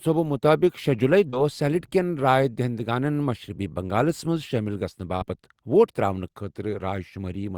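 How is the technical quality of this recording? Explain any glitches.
Two network glitches stand out in the speech; both come from audio packets that never arrived in time and were patched over by the receiver.

From 1.29 to 1.35 s there is a short concealed packet loss. About 40 ms of audio was missing, and the decoder filled roughly 32 ms of it by extending the preceding sound, repeating its pitch if voiced or generating matched noise if not, then crossfading back into real audio. It comes across as a brief smear or wobble.

From 5.17 to 5.26 s a burst of packet loss occurs. Around 40 ms went missing, the receiver synthesised about 49 ms of continuation, attenuating it as the gap lengthened, and roughly 12 ms of the timeline was dropped outright. The result is a short held, fading stretch, after which the speech resumes slightly further on with a small piece skipped.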